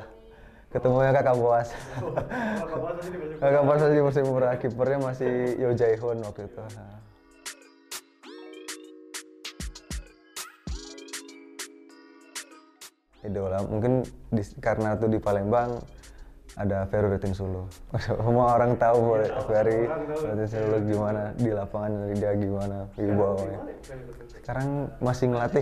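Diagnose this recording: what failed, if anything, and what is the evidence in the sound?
Nothing stood out on listening that would point to a failure at any stage of the chain.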